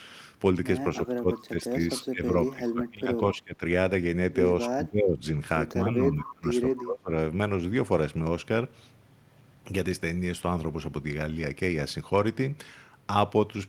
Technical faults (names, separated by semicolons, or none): speech suppressed in double talk